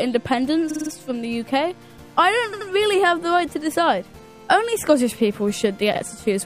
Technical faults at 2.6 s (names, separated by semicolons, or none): repeated frames